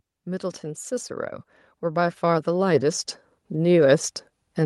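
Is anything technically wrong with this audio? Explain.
Yes. From 0.24 s to the end of the clip, automatic gain rising lifts the whole speech clip. The gain control judged the input too quiet and raised its gain over several seconds, so voice and background noise swell together, unlike a talker moving closer, where room noise would stay level.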